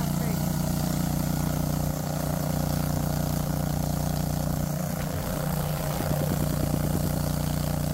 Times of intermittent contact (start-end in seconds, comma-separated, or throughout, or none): none